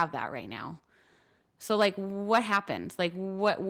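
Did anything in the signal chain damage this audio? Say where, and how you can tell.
No, nothing in the chain audibly damaged this speech; I can't point to any stage that left a mark on it.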